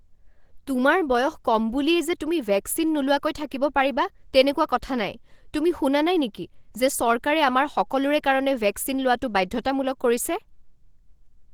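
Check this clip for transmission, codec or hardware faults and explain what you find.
One fault runs through the whole recording: Opus compression, plainly audible from start to finish. The speech sounds hoarse and muffled, with a grainy, roughened texture. The likely cause is Opus running in its hybrid mode, where the lower band is coded by the SILK speech model and the upper band by CELT, which keeps each band's energy but refills it with folded or noise-like content. The audio still extends to about 20.2 kHz, but the coarse detail points to a low bitrate, around 16 kbps.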